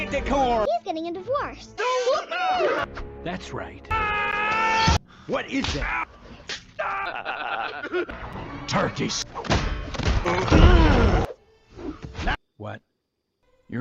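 The audio drops out twice into silent holes with hard edges, at 4.31 s for about 13.5 ms and at 8.33 s for about 5.5 ms. These are gaps between stream segments, where mismatched time stamps at 2-second boundaries are padded with silence. On a waveform or spectrogram they appear as sharp vertical breaks.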